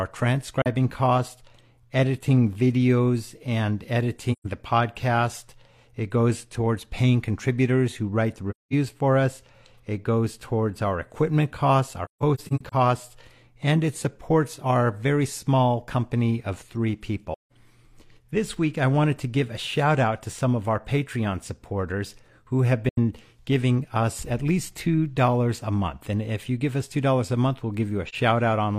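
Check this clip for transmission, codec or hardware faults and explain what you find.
The speech has seven soft dropouts from AAC frame loss with muting, at 0.62–0.67, 4.32–4.47, 8.50–8.73, 12.05–12.74, 17.33–17.52, 22.89–22.98 and 28.08–28.15 s. The decoder zeroed the spectrum of the lost blocks, and the overlapping windows faded the sound out and back in. The result is soft-edged holes from about 43 ms to 213 ms, consistent with one to five missing frames. Around 12.05–12.74 s the gaps are scattered, the longest run around 150 ms.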